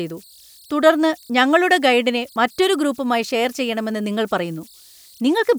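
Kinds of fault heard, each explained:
Converter idle tones: An undithered delta-sigma converter settles into repeating bit patterns when its input is small. Here that makes a faint whistle around 4 kHz, about 32 dB below the speech. It runs throughout, audible in the pauses and as graininess under quiet passages.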